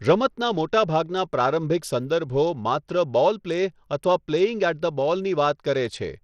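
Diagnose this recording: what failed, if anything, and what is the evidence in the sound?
Bluetooth SBC compression throughout, codec stage: speech treble flickers and drops out under gritty noise, likely a starved bit pool, fitting about 80 kbps.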